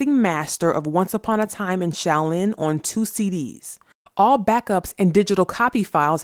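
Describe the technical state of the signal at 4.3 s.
At 4.3 s the speech signal is intact, with no technical fault present at that moment.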